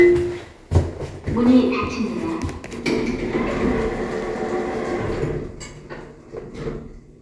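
Nothing in this recording of sounds stands out as a technical problem; it's just the sounds themselves, with nothing getting in their way.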